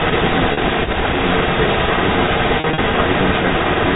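Echo leak runs through the whole of this speech clip, 0.00 to 3.95 s: a second copy of the speech trails the original by 110 ms, roughly 5 dB louder than the speech itself. The likely cause is a loudspeaker at the far end whose echo canceller let its microphone's pickup of the call pass back into the line. Packet loss with pitch repetition hits first at 0.53 to 0.57 s, where 40 ms of audio vanished, which fits four 10 ms packets. The receiver filled the gap by repeating the last pitch period, so the sound briefly holds on a slightly buzzy tone. It strikes again from 2.60 to 2.78 s, where 120 ms went missing in scattered runs of up to 40 ms across 180 ms. There the concealment produces a stuttering string of short held, buzzy fragments.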